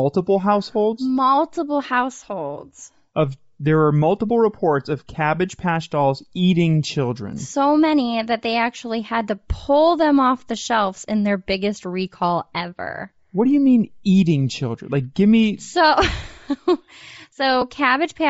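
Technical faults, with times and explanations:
Throughout, Bluetooth LC3 compression: the speech has a plainly audible breathy, grainy edge. The likely cause is the LC3 codec used in Bluetooth LE Audio, and the damage fits a low bitrate near 32 kbps with 7.5 ms frames. The encoder discards much of the upper spectrum and fills it with noise.
17.61 s, lost LE Audio frames: a very brief noisy smear, consistent with one missing 7.5 ms frame. The LC3 decoder covers the gap by reusing the previous frame's spectrum with randomised signs.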